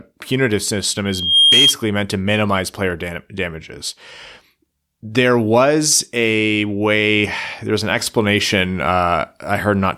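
At 1.05 s a loudspeaker feedback squeal starts and runs to 1.75 s. A microphone is picking up the loudspeaker it feeds, and at 3.2 kHz the loop gain exceeds unity, so that frequency regenerates itself. It swells over about a third of a second into a piercing single tone, peaking at about 10 dB above the speech, then stops at 1.75 s.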